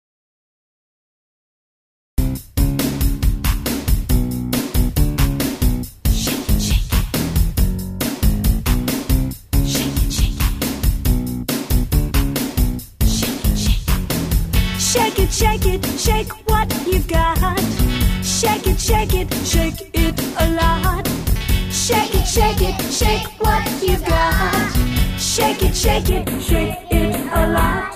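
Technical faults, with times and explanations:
0.00 to 2.18 s, audio dropout to silence: the clip opens in a gap that is already under way, with silence and no room tone beneath it. This likely comes from lost input while the recorder kept writing silence, and whatever sounded then is gone.
26.09 to 27.96 s, channel delay (comb filtering): over the final stretch one channel lags the other by only a few samples, around a tenth of a millisecond. Summed to mono, the shared content cancels in regularly spaced notches starting near 5 kHz, leaving the top end hollow and dulled.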